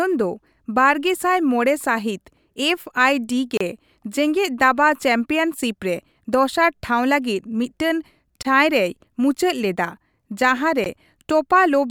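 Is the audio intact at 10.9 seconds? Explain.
No, not quite. Right after "ᱨᱮᱭ ᱢᱩᱪᱟᱹᱫ ᱞᱮᱫᱟ ᱡᱟᱸᱦᱟ", at 10.84 s, there's a block of digital silence, a run of about 16 ms where the sound simply drops out. The signal cuts straight to nothing and straight back with no fade, so both edges produce a sharp discontinuity. At this length it sits right around the point where a gap stops sounding like a tick and starts sounding like a short hole in the speech.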